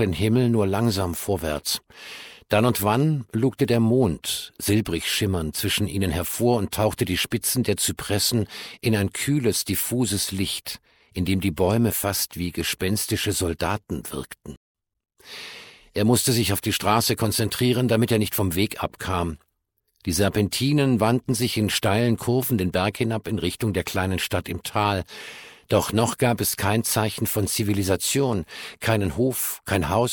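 A corrupt FLAC frame produces a brief glitch at 1.01 s, peaking at about -17 dBFS. Flipped bits went undetected, so the decoder's prediction ran on wrong values from the damaged bit on. The damage stays within a single frame, and the following frame decodes cleanly.

Corrupt frames are muted from 14.56 to 14.70 s, leaving an abrupt hole of silence lasting about 0.14 s. That length fits roughly three frame lengths. The decoder rejected the damaged data and the player filled the gap with silence, so timing stays aligned afterward.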